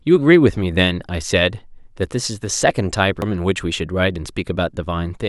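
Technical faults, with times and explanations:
3.22 s, CD skip: the speech cuts out for only a few milliseconds with a small tick, then resumes from a different point on the disc, because a knock or a surface flaw threw the laser onto another turn of the spiral. A simple dropout or digital click differs: after a dropout the sound carries on where it left off. Here the continuity breaks, so the speech after the tick doesn't follow on from what came before it.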